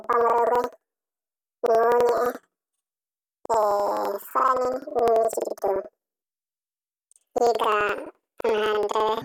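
From start to finish, the speech plays about an octave high with a fast flutter running under it, and that's planar audio read as interleaved. Each block holds all its left samples followed by all its right, but the reader treats them as alternating pairs. So every roughly 85 ms chunk plays twice at double speed, left then right, which keeps the overall pace right. The flutter at about 11.7 Hz fits a 4096-sample block.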